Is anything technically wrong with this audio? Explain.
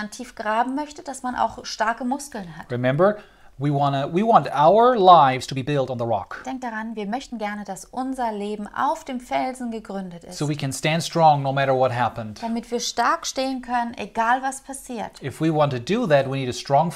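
Yes. There is a time-stretched section from 5.36 to 7.66 s. Here the pace suddenly jumps to about 1.41 times normal speed, yet the pitch does not rise. The likely cause is software squeezing this stretch to fit a shorter length. To keep the pitch steady, it drops short slices of the audio and joins what remains. This makes the section sound rushed. Normal pacing returns after 7.66 s.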